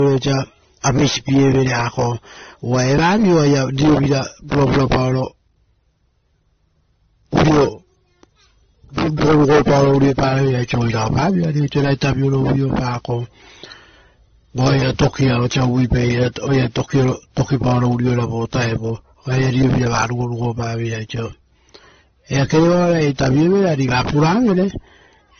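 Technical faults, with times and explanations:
Throughout, transcoding between lossy codecs: The speech has nothing above about 6.3 kHz, so it sounds dull and muffled. Several kinds of artefact are heard together. The likely cause is a chain of low-bitrate encoders, ending in MP3 and pointing to earlier AAC and WMA stages. Each later encoder spent bits on the artefacts before it and added its own. The lowest cut-off in the chain stayed.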